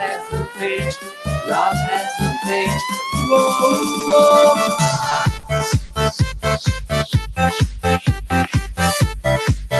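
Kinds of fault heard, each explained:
Noise suppressor applied to music or sounds: A speech-oriented noise suppressor stayed active across the whole clip, treating sustained and ambient content as noise. It keeps adjusting its gain, so levels swing by roughly 10 dB as it decides what to keep. Onsets pass largely intact while held portions and decays are pulled down, giving the audio a pumping, thinned character throughout the 10 seconds instead of a steady level.
Sound cut by the noise suppressor: In two stretches the suppressor judged the material to be noise and attenuated it harder than elsewhere, from 0.03 to 0.67 s and from 0.92 to 1.51 s. The deepest drops are about 12 dB and about 11 dB respectively. In each stretch, around half a second of audio is affected. Sustained and fading parts sink noticeably or have their tails clipped short, while sharper transients mostly survive.
Scattered short gaps: Between 3.99 and 6.33 s, about five brief dropouts occur, each consistent with a lost or late packet on the call path. 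The longest is around 40 ms. The decoder covers each hole by extending the preceding sound, so the stretch stays mostly clear but carries small ticks, smears and hiccups. The concealed portion is a small share of that span. The surrounding audio shows the band-limited, coded quality of an Opus call link.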